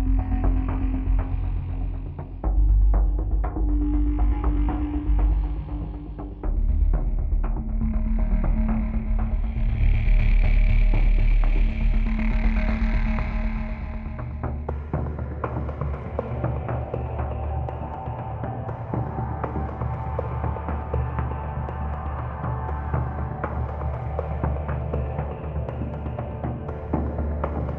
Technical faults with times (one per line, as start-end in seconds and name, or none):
none